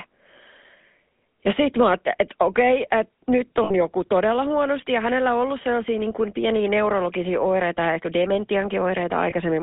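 Throughout, the speech carries the buzzy, gravelly roughness of the GSM full-rate codec, which fits a 13 kbps coder. The line runs from 200 Hz to 3.6 kHz. Unlike plain band-limiting, the excitation itself sounds coarse. At 3.64 to 3.71 s and again at 9.30 to 9.34 s, lost GSM frames leave the last good sound held as a metallic ring rather than cutting to silence. The first gap, about 60 ms, points to three lost frames; the second, to one.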